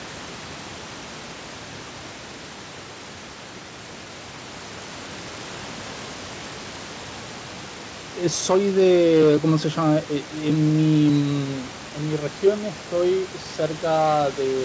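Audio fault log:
No faults are present in this speech clip. Room noise sits about 15 dB below the speech, and the call path leaves nothing above 8 kHz, which fits a wideband codec such as G.722.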